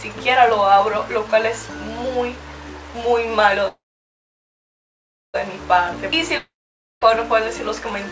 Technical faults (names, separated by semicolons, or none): call audio freeze; long network dropout